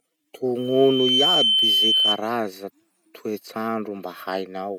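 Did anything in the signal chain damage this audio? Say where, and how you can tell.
Yes: loudspeaker feedback squeal in the analogue mic-to-speaker loop, 0.58 to 2.21 s. A 3.1 kHz tone swells over about half a second above the speech, drawing a single bright horizontal line on a spectrogram.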